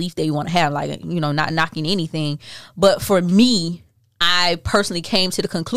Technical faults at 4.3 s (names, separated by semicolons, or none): hard clipping